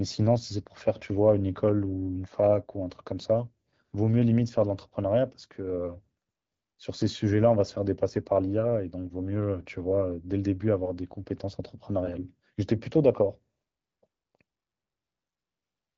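No technical faults can be heard in this speech.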